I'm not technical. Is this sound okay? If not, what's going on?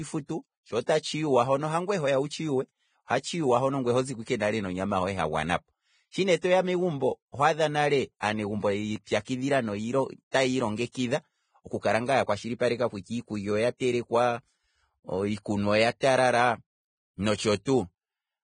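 No, not entirely. Throughout the whole speech recording there is a hissy, grainy roughness, and the sharp starts of sounds are smeared rather than crisp. Nothing is heard above about 9.7 kHz, so the top sparkle is missing. This is likely heavy Vorbis compression: to make the file small, the encoder stores the fine high-frequency detail so roughly that it turns into noise, and it discards the highest frequencies entirely.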